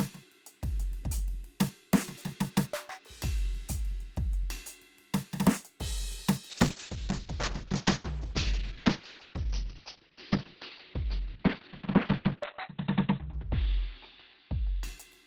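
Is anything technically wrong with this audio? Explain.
Yes. From 6.55 s to the end, the music suffers a call bitrate drop: the encoder's rate falls from 48 to 6 kbps and its bandwidth narrows from 20 kHz to 4 kHz. The sound turns muffled and watery, and it stays that way without gaps rather than breaking up as packet loss would.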